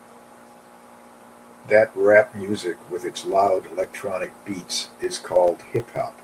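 Filter restarted on every block, from 3.32 s to the end of the speech: the filter loses its state between blocks and starts each from silence, so every block opens with a small transient, heard as a 25 Hz buzz that tracks the signal's level and fits 40 ms blocks.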